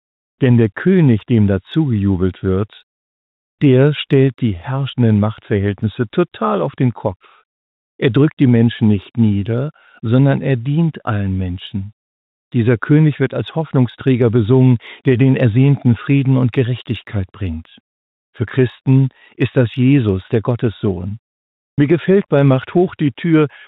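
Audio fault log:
Throughout: block size mismatch (truncated). One stage writes longer blocks than the next reads, so the tail of each block is discarded. The regular gaps produce a steady buzz at about 43.1 Hz, which fits 1024-sample blocks, while playback speed stays at 1.0x.
21.27–21.78 s: comfort noise in place of the background. The sender likely stopped transmitting during a pause and the receiver filled it with synthetic noise. For 510 ms the real background, already about 82 dB below the loudest parts, gives way to smoother synthetic noise about 36 dB quieter.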